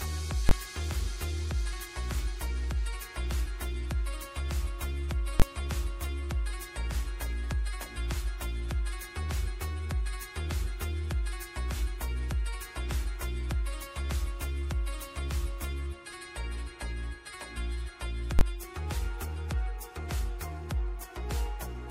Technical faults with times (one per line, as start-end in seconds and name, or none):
0.49-0.51 invalid numbers at full scale
5.40-5.42 invalid numbers at full scale
18.39-18.41 invalid numbers at full scale